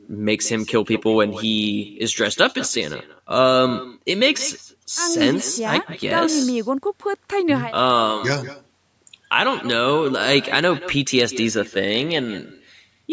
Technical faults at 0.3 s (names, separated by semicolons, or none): echo with no canceller